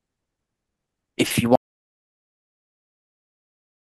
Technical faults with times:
1.55-3.92 audio dropout to silence

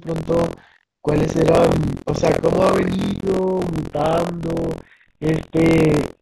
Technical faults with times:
0.00-6.22 buffer tearing
3.13-3.23 handover gap
3.23-6.22 fallback to narrowband

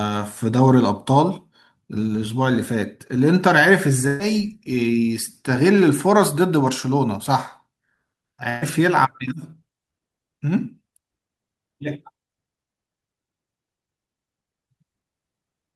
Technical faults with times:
4.07-4.21 burst of packet loss
8.49-8.63 burst of packet loss

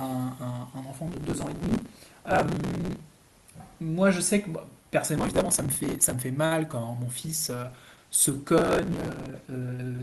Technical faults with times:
1.08-3.00 processor overload crackle
5.16-6.13 processor overload crackle
6.46-6.53 short stall from a late packet
6.71-6.86 short concealed packet loss
7.22-10.02 call bitrate drop
8.58-9.30 processor overload crackle

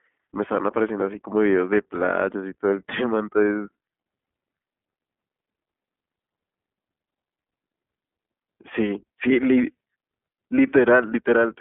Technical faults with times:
0.00-11.60 iLBC codec

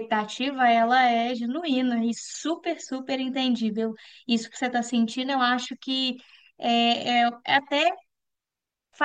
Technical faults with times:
none

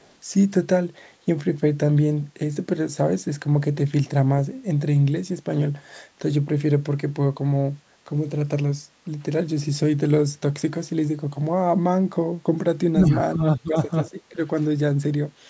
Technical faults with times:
0.02-0.12 echo leak
12.92-13.77 speech suppressed in double talk
14.34-14.39 speech suppressed in double talk

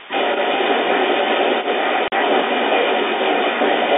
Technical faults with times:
0.00-3.97 other side's voice leaking through
2.08-2.12 packet loss filled with silence

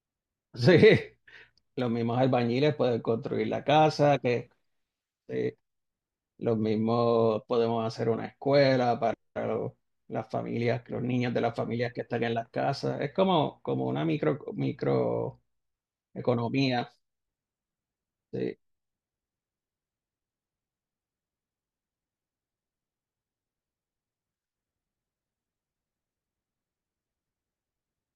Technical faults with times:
none

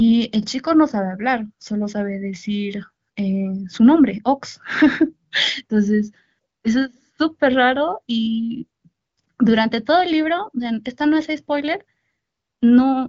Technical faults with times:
none

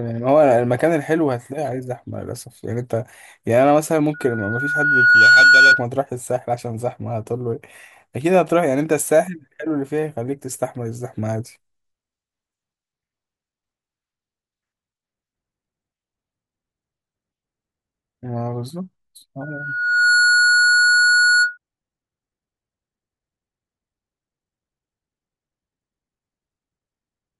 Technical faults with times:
4.13-5.84 loudspeaker feedback squeal
19.41-21.58 loudspeaker feedback squeal

